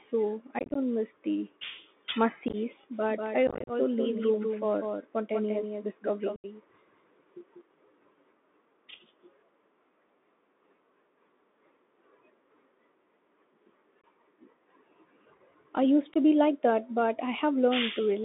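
Throughout, the Bluetooth CVSD headset codec is plainly audible. Its one-bit, 64 kbps delta modulation confines the audio to about 200 Hz to 3.6 kHz, lays a granular hiss under the speech, makes sibilants scratchy and distorts loud high-frequency sound where the adaptive step cannot keep up.

Unconcealed Bluetooth headset packet loss drops short stretches of the link and leaves hard-edged holes, with a brief level dip as the codec recovers. At 0.59 to 0.77 s, just before "miss the", about 105 ms goes missing in scattered runs up to 19 ms long, heard as a chopped crackle. Further holes follow at 2.48 to 2.55 s and at 3.47 to 3.71 s, the worst of them, with 150 ms lost and runs up to 34 ms. Another comes at 6.36 to 6.46 s.

From 2.93 to 7.61 s a doubled audio track runs alongside the speech: a full-band copy about 5 dB down trails by roughly 200 ms, dry and without room colour, and starts and stops abruptly. 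The likely cause is a second, slower capture path mixed in with the first.

Two further brief packet-loss holes occur at 14.01 to 14.04 s and at 16.14 to 16.16 s, the latter between "I used" and "to be like that".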